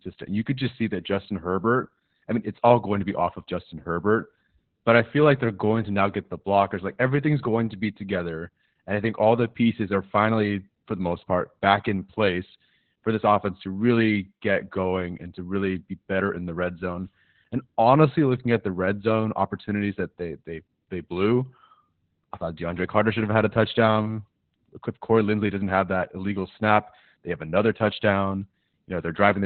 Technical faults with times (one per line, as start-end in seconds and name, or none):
0.00-29.45 Opus voice compression